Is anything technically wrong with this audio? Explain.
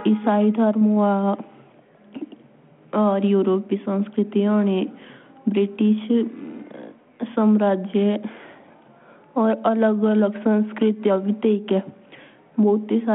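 No, nothing's wrong here: it's speech carried over a 32 kbit/s G.726 link, so it sits in the telephone band of about 150 Hz to 3.4 kHz with the light coding texture that rate brings, which is simply how that channel works.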